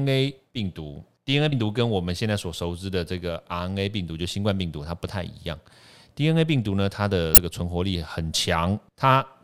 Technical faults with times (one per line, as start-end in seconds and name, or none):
1.49-1.52 damaged data in a compressed stream
7.34-7.38 damaged data in a compressed stream